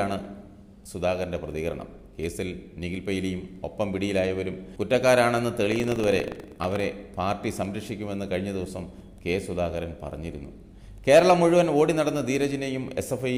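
From 5.68 to 6.84 s, buffer tearing sets in. The writer and reader of the ring buffer have slipped into each other. A small slice of each period, around a twentieth, repeats audio roughly a tenth of a second old. The hard joins give a robotic rattle at 25 Hz, which points to a 40 ms buffer period.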